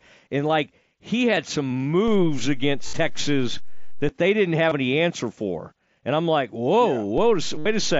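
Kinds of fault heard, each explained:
DC step: The waveform's zero line jumps to a new offset, as happens when a converter recalibrates or an offset-carrying input is switched in. Here it shifts at 2.08 s and steps back at 4.09 s, then shifts again at 7.18 s and holds to the end. Each jump is heard as a low thump or click, while the speech carries on unaffected.
Concealed Bluetooth headset packet loss: Packets between headset and phone went missing over the mSBC link, and the receiver filled each gap by repeating the best-matching recent stretch of waveform. The 22.5 ms gap at 4.69 s and the longer runs, 60 ms at 2.87 s and 67.5 ms at 7.60 s, sound like a buzzy held tone at full level, ending in a slight warble as real audio resumes.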